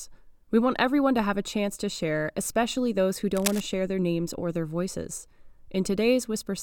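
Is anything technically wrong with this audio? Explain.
Yes. From 3.35 to 3.60 s the speech has a burst of cable scratch noise: about a quarter of a second of dense, ragged scratching and rustling only a few decibels below the speech itself. It is likely a worn cable, connector or control being moved, so the contact resistance jumps about rapidly. Unlike a single click or a dropout, the burst is continuous and irregular, and the speech carries on audibly underneath it.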